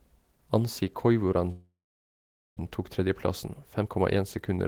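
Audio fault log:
1.51–2.61 s, long network dropout: the sound trails into a fading buzz, then near-silence for about 0.85 s, and resumes with about 0.74 s missing, likely from lost packets rather than a brief glitch.
3.59–4.67 s, jitter buffer speed-up: playback runs about 108% fast at unchanged pitch as short pitch-period pieces are trimmed, removing roughly a tenth of a second of backlog.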